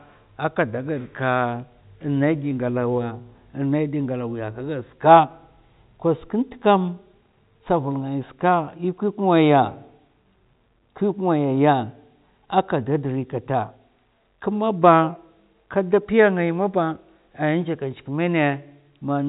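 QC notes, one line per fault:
No faults found; the speech sits in the usual G.711 telephone band with nothing above 4 kHz, and the format's level-tracking quantisation noise is at most faint.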